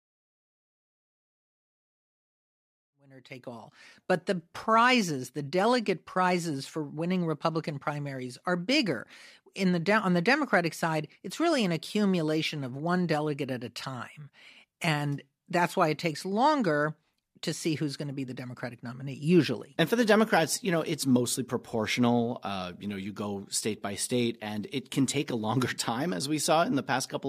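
Nothing here sounds wrong to the ear; it's just speech coming through as it should, with nothing technical getting in its way.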